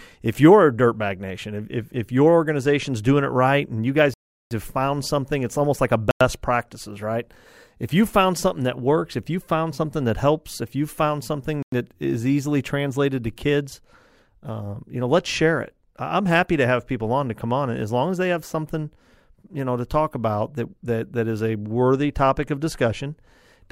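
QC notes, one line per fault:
4.14–4.51 s, 6.11–6.21 s, 11.63–11.72 s: Bluetooth stall. The speech drops to silence for 372 ms, 97 ms and 98 ms, then resumes. This is likely interference delaying packets, so the headphone buffer empties and playback waits for resent data.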